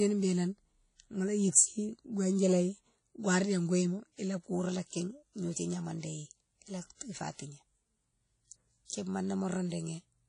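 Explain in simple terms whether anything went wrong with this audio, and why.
The audio was most likely squeezed by WMA compression, an older codec that stores sound in blocks and discards detail. Throughout the speech this leaves plainly audible ringing and wash, hiss that swells with the voice, and nothing above 10.1 kHz, so it sounds dull.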